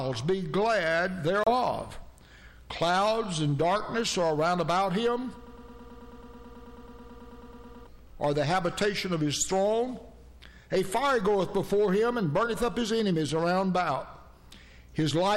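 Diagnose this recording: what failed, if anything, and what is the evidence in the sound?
Hard clipping at a converter or gain stage runs throughout, driven about 9 dB over. A few percent of samples are flattened into squared waveform tops, with spectrogram harmonics smeared upward.

A Bluetooth dropout is the likely cause of the silent hole from 1.44 to 1.54 s. It shows as a flat-line waveform gap and a blank vertical spectrogram stripe.

A broken-record loop from 5.47 to 7.87 s was likely a stalled playback or stream buffer. One 108.6 ms fragment repeats 22 times, forming identical tiled blocks on the spectrogram.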